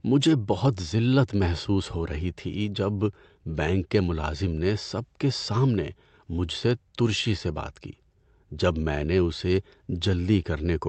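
Nothing's wrong here: the speech comes across a normal call connection with its top end stopping at around 8 kHz, just as a call codec would leave it, and nothing else stands out.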